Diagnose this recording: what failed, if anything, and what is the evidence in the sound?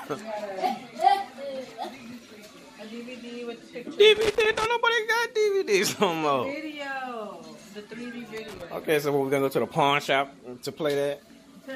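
A failing contact in the analogue wiring, a loose connector, intermittently broke the signal path. The result is loose connector crackle, irregular bursts of scratchy crackle from 4.16 to 4.66 s and from 8.37 to 8.65 s, as the chopped signal breaks through the sound.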